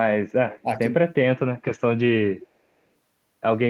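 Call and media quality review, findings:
Echo leak, 0.5–0.6 s and 2.41–2.47 s. Faint delayed copy of the speech, 387 ms behind, about 20 dB and about 25 dB under the direct signal. Likely far-end loudspeaker pickup that the echo canceller failed to fully remove, returned down the line.

Speech suppressed in double talk, 0.63–0.9 s. Talker level dips by a few dB in patches totalling around 150 ms. Likely the echo canceller misreading overlapping talk as echo and attenuating the local speech along with it.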